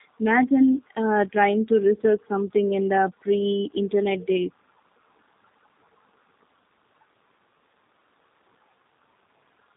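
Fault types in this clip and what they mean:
Tandem speech coding: the speech went through two speech codecs in a row, decoded and re-coded between them. The second coder reworks already damaged audio. It sounds rough, muffled and warbly, with nothing above 3.6 kHz, fitting AMR-NB followed by G.729A.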